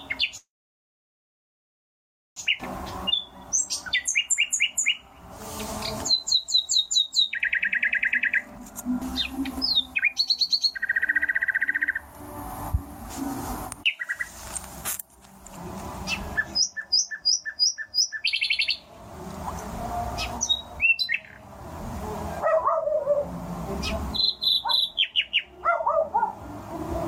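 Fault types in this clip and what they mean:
call audio freeze: Packets were likely held up and the jitter buffer ran dry, so from 0.37 to 2.37 s a brief tail decays into near silence, inserting about two seconds of delay.
skip ahead: The backlog of late audio was then discarded to catch up, so at 2.60 s playback jumps forward almost seamlessly, losing roughly two seconds of sound.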